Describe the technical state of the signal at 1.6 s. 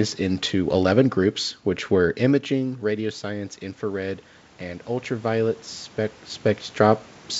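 At 1.6 s the signal is intact, with no technical fault present.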